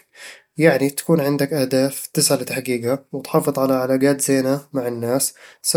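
Speech recording with no technical faults to report.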